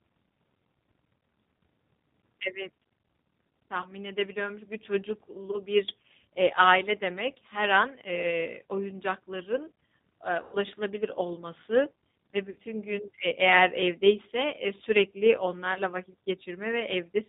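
Throughout, the speech sounds band-limited, slightly rough and synthetic, with nothing above 4 kHz, which is plainly audible G.729 codec damage at 8 kbit/s. At 3.82 to 3.88 s, 5.51 to 5.58 s, 10.43 to 10.58 s, 12.50 to 12.57 s and 15.74 to 15.80 s, the speech smears into a fading buzz and stays weak briefly afterward. This is VoIP packet loss concealed by the speech codec, with 20 ms, 20 ms, 100 ms, 60 ms and 20 ms of audio missing.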